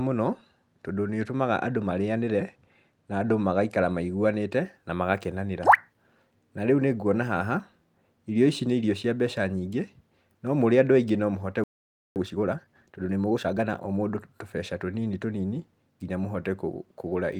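At 11.64 s, right after "no mũhote", the speech cuts to silence for about 0.52 s. This is a playback stall, likely the player starving for data.

From 12.16 to 14.24 s, time-compressed catch-up hurries the speech to 1.25 times normal speed while keeping its pitch, unlike a sped-up resample. Short cross-faded cuts shorten the backlog before "tũbeca tũnini tũnini".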